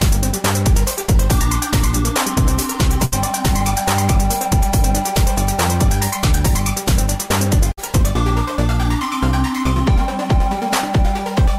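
At 3.05 to 3.14 s and again at 7.72 to 7.79 s, a burst of packet loss occurs. Data arrived too late or not at all. The receiver stretched the last sound and faded it, for 64 and 54 ms. About 60 ms of audio is skipped each time.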